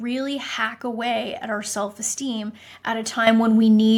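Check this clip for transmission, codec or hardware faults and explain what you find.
One fault stands out: at 3.27 s the speech and the background noise behind it jump louder together, by about 9 dB, in a single step. This is a microphone volume step-up, where the call software judged the input too quiet and raised the device's input gain at once.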